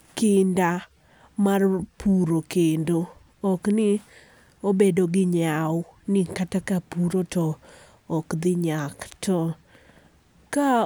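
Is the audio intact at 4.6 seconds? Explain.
Yes, at 4.6 seconds the speech is intact, with no dropout, click, distortion or other fault to be heard at that moment.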